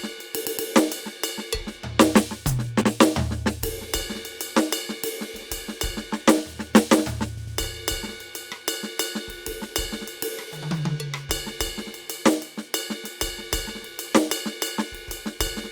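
Music with repeated frames: a 120 ms block stutters three times at 0.45 s, an 80 ms block twice at 2.81 s, and a 100 ms block three times at 7.37 s. Unlike a dropout, nothing is lost. Duplicated compressed frames lengthen the track.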